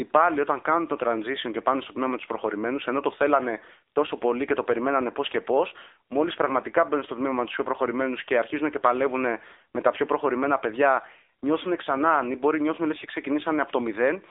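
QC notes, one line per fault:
Throughout: AMR narrowband mobile codec. The speech has been squeezed through the mobile-phone speech coder, which rebuilds the voice from a vocal-tract model excited by a handful of pulses per short subframe. The coding damage is plainly audible as a buzzy, synthetic edge, which fits one of the lower AMR-NB modes near 8 kbps. The band is held to roughly 300 Hz to 3.7 kHz, with nothing above 3.8 kHz, so sibilants lose their air and the low end thins out.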